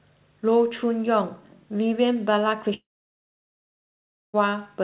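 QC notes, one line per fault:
2.74–4.35 s, long network dropout: the sound at 2.74 s carries on as a brief buzzy tail that fades within about a tenth of a second, then roughly 1.5 s of silence follows until the audio resumes at 4.35 s, with about 1.6 s of material gone. This is likely a stall in packet arrival that the receiver masked and then muted. On the waveform it looks like a short decaying smear and then a flat line. The spectrogram shows a blank band, capped at 4 kHz like the rest of the narrowband call audio.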